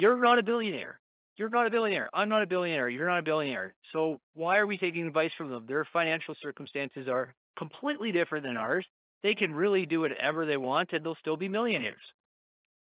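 The speech carries no technical faults, and its telephone-style coding behaves as expected: nothing above 4 kHz comes through, which fits an 8 kHz mu-law path, and a faint hiss rides about 38 dB below the signal and rises and falls with its level.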